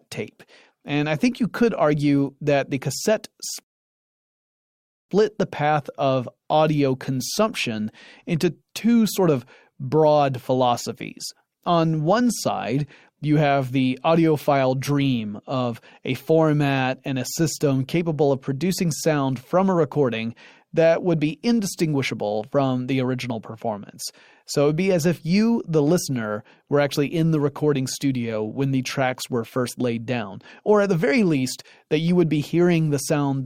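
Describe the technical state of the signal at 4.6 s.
The player ran dry of downloaded audio, a rebuffering stall from 3.63 to 5.09 s, so the speech drops to silence after "argue that the cassette" and resumes intact at "the path of audio", 1.46 s late.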